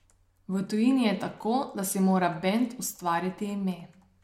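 No technical faults can be heard anywhere in this recording of speech. Nothing in the sound points to a problem in how it was captured, processed or played back.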